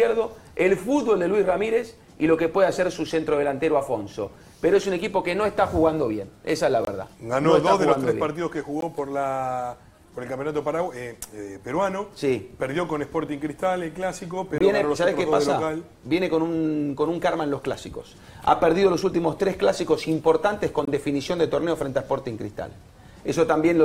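Five brief dropouts interrupt the sound at 6.85 to 6.87 s, 8.81 s, 13.27 s, 14.58 to 14.61 s and 20.85 to 20.88 s. These are blocks of digital silence, where samples were replaced by zeros with no fade. The 23 ms gaps and the 18 ms gap at 8.81 s register as short holes or pops, and the 6 ms one at 13.27 s as a tick. Three gaps match a 1024-sample buffer, likely one not filled in time.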